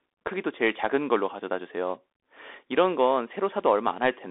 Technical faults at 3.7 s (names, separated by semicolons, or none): Bluetooth CVSD headset codec